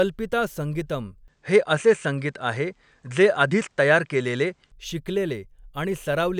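Input switched to a poorer device, from 1.28 to 4.72 s: the speech abruptly loses everything above 9.4 kHz, shifts level by about 5 dB, and gains a faint new noise floor, then clears again with no gap, likely because recording jumped to another microphone and back.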